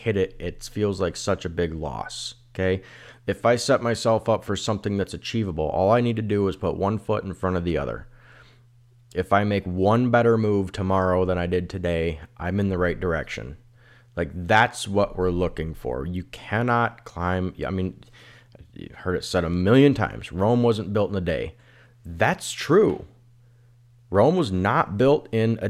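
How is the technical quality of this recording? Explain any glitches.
No glitches turn up anywhere in this speech recording. There's nothing to explain, because nothing in the audio breaks from what a properly captured recording should do.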